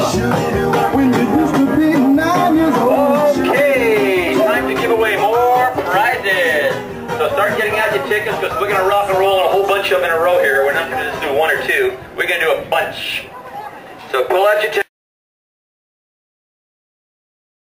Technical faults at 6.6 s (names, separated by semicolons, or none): drift correction step